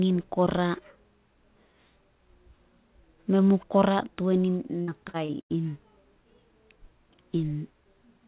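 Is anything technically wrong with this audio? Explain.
Yes. Repeated packet loss (robotic sound) occurs from 4.82 to 5.52 s. Four gaps open in quick succession, the longest 88 ms, and each is patched by stretching the preceding sound. About a third of that stretch is filled in this way, so the speech turns choppy and robotic. Throughout the clip the top end stops at 4 kHz, which fits a G.711 mu-law call path.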